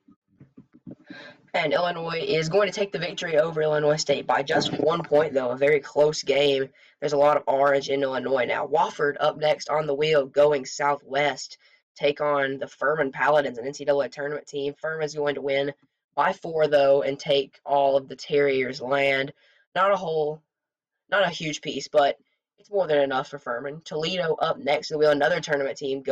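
Nothing in the audio stood out as a problem on listening.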